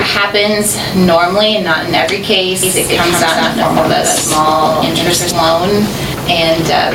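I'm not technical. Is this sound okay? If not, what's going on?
No. The recording level was likely set far too high, so an automatic control keeps pulling it down. This gain pumping squashes the sound, pulling loud and soft parts closer in level throughout.

From 2.63 to 5.31 seconds, a doubled audio track appears, likely a second, slower copy of the same audio. It trails about a sixth of a second behind, slightly quieter, then starts and stops abruptly.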